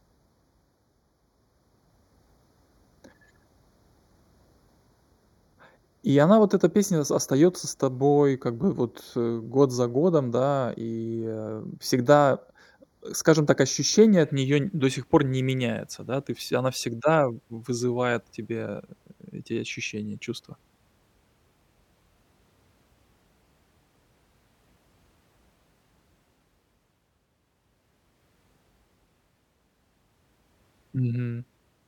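From the start to 14.24 s, just before "от неё н до", there's channel delay (comb filtering): one side lags by roughly 0.2 ms, notching from around 3 kHz, so the speech sounds hollow.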